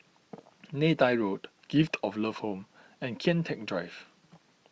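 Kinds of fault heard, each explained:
No faults of any kind are heard in this speech.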